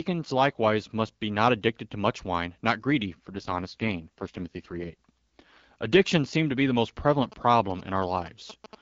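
From 3.24 to 5.64 s, just after "much wine not greedy", the voice turns rough and synthetic: an AMR rate drop, where the AMR-WB (HD Voice) codec falls from 12.65 to 6.6 kbit/s, then recovers.

From 7.23 to 8.75 s, after "to be the most", a galloping dit-dit-dit of short 217 Hz buzzes sits around 15 dB below the speech: GSM signalling bursts from a nearby 2G phone, rectified by the audio circuit.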